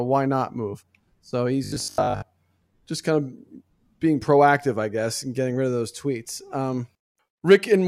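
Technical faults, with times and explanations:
1.64–2.30 s, robotic sound from repeated short buffers: the speech turns into a rigid, metallic buzz pitched at 50 Hz that still loosely tracks the syllables. The cause is likely audio arriving too slowly, so a fragment of about 20 ms (one cycle of the buzz) is replayed over and over while most of the real audio in this stretch is skipped. The fixed, steady pitch sets it apart from codec warble, which shimmers unevenly rather than droning.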